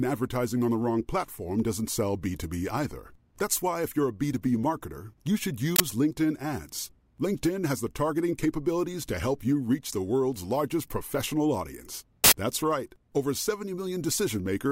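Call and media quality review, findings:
Loud digital noise bursts at 5.76 s (40 ms, after "marketer you should") and 12.24 s (80 ms, after "world's largest professional audience"). Uninitialised buffer: playback read unwritten memory as samples.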